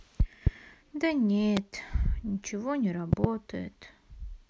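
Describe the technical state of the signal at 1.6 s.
At 1.6 s the speech carries a single loud pop spanning 1.57 to 1.59 s, roughly 20 dB above the surrounding level. A sudden voltage step or pulse, likely from a plug, switch, static discharge or driver glitch, was added to the signal and then shaped by the downstream circuitry into a brief transient. It is heard as one sharp thump laid over the speech, which continues uninterrupted beneath it.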